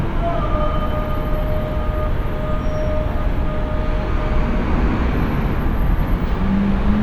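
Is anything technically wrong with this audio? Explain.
No, nothing technically wrong stood out on listening to this recording of sounds.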